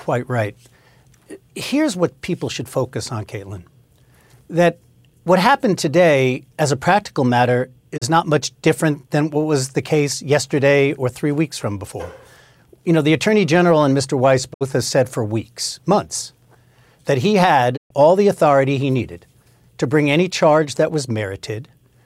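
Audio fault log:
7.96–8.04 s, 14.52–14.63 s, 17.76–17.92 s: digital broadcast dropout. The speech fades out over about 20 ms into silence, then returns, with gaps of roughly 32, 64 and 128 ms that grow at each event. The receiver lost or rejected corrupted frames and muted until valid data resumed. Each gap length fits one, two and four whole frames of 32 ms. Speech sent during these gaps is missing rather than degraded.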